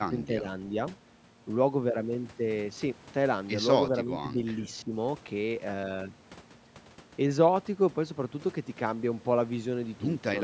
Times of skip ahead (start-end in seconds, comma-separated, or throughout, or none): none